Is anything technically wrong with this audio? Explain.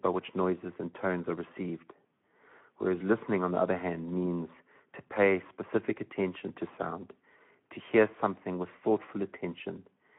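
Yes, the speech has plainly audible codec damage throughout.

Speex codec: For the whole clip, the speech sits in a line band of 150 Hz to 3.5 kHz and has a grainy, coded texture, consistent with roughly 11 kbps Speex, whose CELP model spends few bits on the excitation. On a spectrogram, energy stops sharply near 3.5 kHz and the harmonics look smeared.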